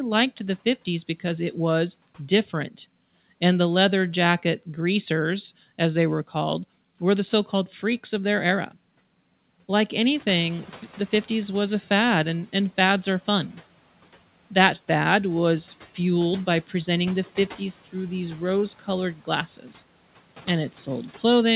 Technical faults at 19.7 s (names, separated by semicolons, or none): speech cut by the noise suppressor